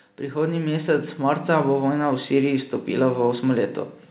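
Automatic gain rising from 0.18 to 3.81 s: the gain control judged the input too quiet and raised gain by about 8 dB, so speech and background swell together.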